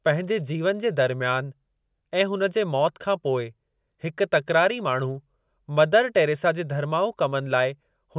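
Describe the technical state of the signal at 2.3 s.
At 2.3 s the speech signal is intact, with no audible dropout, distortion, glitch or other technical fault.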